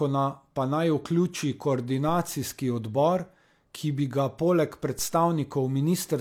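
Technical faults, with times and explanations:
2.09 s and 4.99 s, DC step: the waveform's zero line jumps suddenly at each point, the second right after "bi ga poleg", and the offset then drains away as a roughly 2 Hz high-pass would let it, so each is heard as a low thump while the speech carries on unchanged. On a waveform the trace leaps off centre and curves slowly back; a spectrogram shows a brief broadband vertical stripe with energy concentrated at the lowest frequencies.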